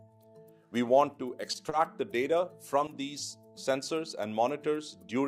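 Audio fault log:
1.51–1.55 s and 1.69–1.73 s, short stall from a late packet: the sound stretches 20 ms while the empty buffer waits, then resumes where it stopped. Unlike packet loss, nothing is skipped.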